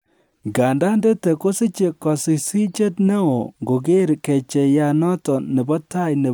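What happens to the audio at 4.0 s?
Dropped samples at 4.00 s cause a single sharp click in the speech. The waveform jumps abruptly from one value to a later one, most likely because a handful of samples, roughly a tenth of a millisecond's worth, went missing from the stream. That gap is far too brief to remove any audible sound, so nothing is heard as cut out. The discontinuity itself is the click, and it shows as a thin vertical line across the spectrum.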